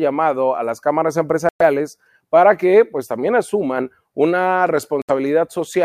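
Bluetooth dropouts at 1.49 to 1.62 s, right after "a las cámaras", and at 5.02 to 5.11 s, after "pues también asuman una". The speech cuts to silence for about 116 ms and then about 70 ms, with abrupt or briefly faded edges, and resumes further along as though it had kept playing through the gap. These are likely wireless packets arriving too late at the headphones and being discarded, leaving the output empty until valid data returned.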